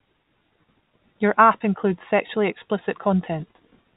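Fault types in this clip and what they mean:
Nothing in this speech clip stood out as a fault on listening.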